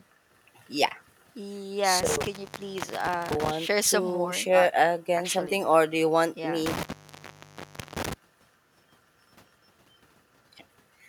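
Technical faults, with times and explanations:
2.01–3.51 s and 6.66–8.13 s, intermittent contact: the speech drops out twice, with the line open for about 1.07 s the first time and 1.14 s the second. Each dropout has a burst of crackle at its edges as the connection scrapes open and closed, and faint hiss fills the gap. That's the sound of a loose cable or plug briefly losing contact and the signal path breaking.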